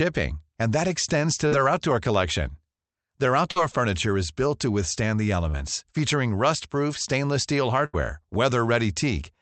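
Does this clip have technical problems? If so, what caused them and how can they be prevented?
Yes. Short concealed packet loss occurs at 1.47–1.53 s, 3.51–3.58 s and 5.50–5.56 s. Each time, about 40 ms of the speech failed to arrive in time to be played. The decoder bridged the hole by extending the preceding sound, voiced or noise-like, and then cross-faded back into the real signal, leaving a brief smear or wobble where a short consonant may be lost. Prevention: use a network path with less loss, or enable forward error correction in the codec.

A burst of packet loss runs from 7.86 to 7.95 s. Roughly 80 ms went missing in one stretch. The receiver held the last sound and faded it down across the gap, so it comes out as a dying buzz or hiss, and the speech then resumes further on with that piece absent. The Opus call path limits the audio to about 8 kHz. Prevention: add redundancy and allow a larger jitter buffer, so that late packets can still be played.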